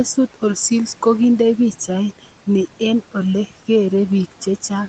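From start to finish you can hear noise suppressor artifacts. The suppressor is pulling down the bands it reads as steady noise by about 12 dB, and it does that frame by frame. So the room noise, sitting about 20 dB under the speech, drops away in the gaps and comes back up underneath the talking. All of it stays within the 8 kHz band the call carries.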